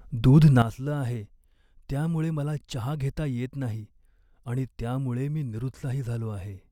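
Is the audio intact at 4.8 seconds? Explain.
No. At 4.8 s the speech is still sitting under a sudden gain jump that begins at 0.62 s and lasts to the end of the clip. The level drops by about 12 dB from one sample to the next, likely because a gain setting was applied with no ramp. Voice and background noise fall together and stay down. That separates it from a fade or from automatic gain control, which would move gradually and pump the noise floor.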